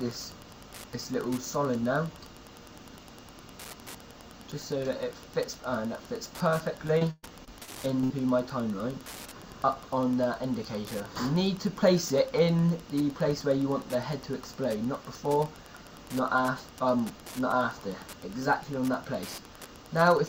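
A steady ticking runs through the whole clip at close to ten ticks a second, sitting around 20 dB below the sound itself. This is Wi-Fi interference. A nearby Wi-Fi radio sends a beacon every 102.4 ms, and the audio circuit picks it up and rectifies it, so each beacon becomes an audible tick. Any bursts of data traffic between beacons add irregular rasps on top of that regular beat.

From 6.87 s to 8.12 s the sound turns choppy and robotic, with pieces missing. This is repeated packet loss. The pattern points to seven separate dropouts in quick succession, the longest lasting 121 ms. Each hole was patched by extending the last good sound. About 285 ms was filled in that way and about 300 ms was lost outright, so roughly a quarter of that stretch is concealment rather than real audio.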